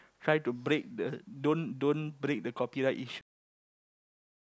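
At 3.21 s the speech stops dead mid-sound. This is a cut-off end. The final stretch of audio was never written or played out. Nothing decays or fades. The signal drops straight to digital silence, which lasts until the clip ends.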